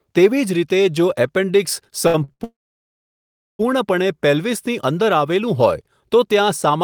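Around 2.07 s the speech starts catching: short stalls from late packets at 2.07 to 2.16, 2.24 to 2.30 and 2.32 to 2.42 s. Each time the jitter buffer runs dry, the last sound gets held for roughly 45 to 75 ms with a faint buzz or dip, then carries on without losing anything.

Right after, at 2.44 s, there's a proper call audio freeze lasting until 3.61 s. The held sound fades out fast and you get about 1.07 s of silence before the speech resumes where it left off, likely packets stuck in transit for over a second.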